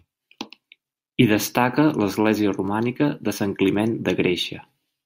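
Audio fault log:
2.68 s and 3.75 s, dropped samples: two single sharp clicks, the first just after "destaca l'església", each showing as a thin vertical line across the spectrum. The likely cause is a tiny fraction of a millisecond of samples missing from the stream, so the waveform jumps straight from one value to a later one. That step is too brief to remove any audible sound, but its abrupt edge spreads energy over all frequencies and is heard as a click.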